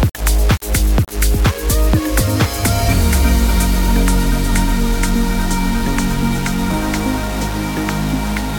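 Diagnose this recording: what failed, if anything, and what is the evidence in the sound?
A coarse, grainy distortion sits on the sound for the whole clip and moves with it. Quieter passages turn gritty, and the softest moments either cut to silence or sputter, with the error only about 15 dB below the signal. The likely cause is low bit depth without dither in a sample-format conversion: the audio was rounded to just 4 bits, so the quantisation error follows the waveform instead of being smoothed into noise.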